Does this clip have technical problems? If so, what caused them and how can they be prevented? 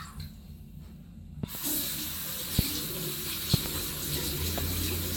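Yes. A loud pop, likely from a voltage pulse such as a plug, switch, static discharge or driver glitch, thumps well above the sound at 1.43–1.58 s (double), 2.59–2.61 s, 3.54–3.68 s (double) and 4.58–4.60 s. Seat connectors firmly, avoid switching or touching equipment while recording, and ground the setup against static.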